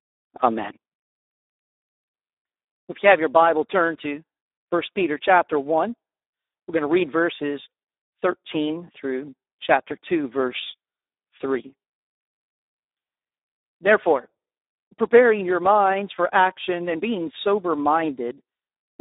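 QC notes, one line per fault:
Throughout: Speex codec. The speech is confined to a 300 Hz to 3.7 kHz band with nothing above 3.8 kHz. Heavy coding damage makes it hoarse, noisy and edging toward robotic, as the CELP coder starves the excitation, which fits about 8 kbps.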